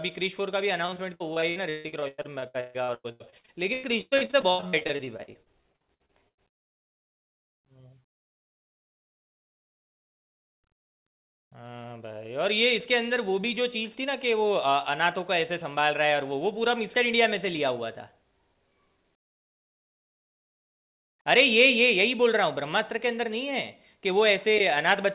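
From 0.86 to 6.71 s the speech breaks up with repeated packet loss, giving a robotic sound. Dozens of short holes follow one another, the longest about 145 ms. Each hole is bridged by stretching the last sound forward, so patched audio fills about 2.1 s of the stretch, roughly a third of it. The result is choppy, with syllables smeared or missing. Throughout the clip nothing is heard above 4 kHz, which fits a narrowband G.711 call codec.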